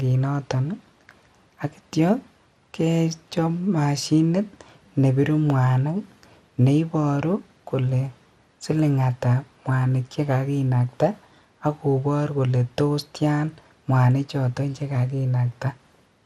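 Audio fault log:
Throughout: MP2 compression. The speech sounds dull, with a gurgling, granular roughness, likely from MPEG Layer II coding at a rate consistent with about 80 kbps. Too few bits shut off upper sub-bands, which flicker in and out, and coarsely quantise the bands left.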